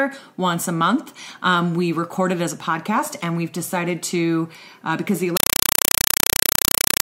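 At 5.37 s the audio gives way to chattering static, which runs to the end. This is a compressed stream played as audio. An AC-3 (Dolby Digital) stream reached the output as if it were plain samples and was never decoded. Each coded frame plays as a 4 ms burst of noise followed by silent padding. The bursts repeat 31.25 times a second, which gives the harsh, buzzing rattle. The density of the bursts fits a stream of around 192 kbps.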